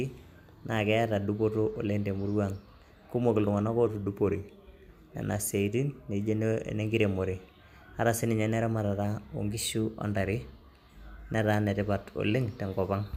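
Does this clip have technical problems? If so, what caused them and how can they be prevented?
Yes. From 3.86 to 4.92 s the speech drops about 110 cents, just over a semitone, and slows by 6.1%. From 9.53 to 10.05 s it jumps about 103 cents sharp and runs 6.1% fast, then snaps back. This is likely a drift correction step: clock-matching software changed the playback rate in one abrupt jump to refill or drain its buffer. Correcting drift through continuous fine-grained resampling, or locking both devices to a shared clock, prevents it.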